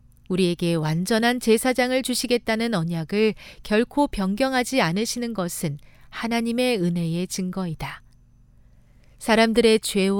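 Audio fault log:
No fault is heard in this speech clip.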